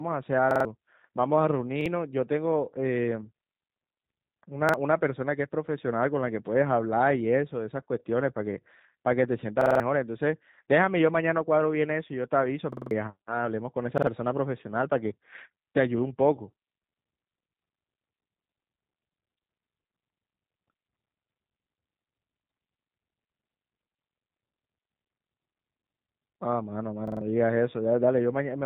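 From the very start the whole clip runs through the G.729 codec at 8 kbit/s, and you can plainly hear it. It rebuilds speech from a vocal-tract model plus a handful of pulses per frame, so the voice comes out a bit rough and synthetic. Everything above about 3.8 kHz is gone, which gives it that flat phone-line dullness.

On top of that there are seven repeated-buffer stutters, where fresh audio didn't arrive in time and the device replayed its last chunk. Each chunk is roughly 46 ms long, which fits a 2048-sample buffer. They come at 0.51 to 0.65 s, 1.81 to 1.86 s, 4.69 to 4.74 s, 9.61 to 9.80 s, 12.73 to 12.91 s, 13.98 to 14.07 s and 27.08 to 27.21 s. The short ones sound like a quick double hit. The longer ones, around 9.6 s and 12.7 s, become a longer repeated stutter with hard joins and swallow about a fifth of a second of real audio.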